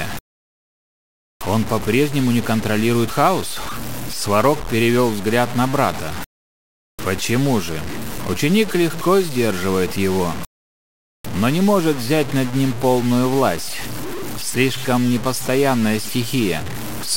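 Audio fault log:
throughout, low bit depth without dither: a coarse, grainy distortion rides on the sound and shifts with it, quiet passages turning gritty and sputtering or dropping out. This is likely 5-bit truncation without dither, leaving signal-following error only about 15 dB below the sound.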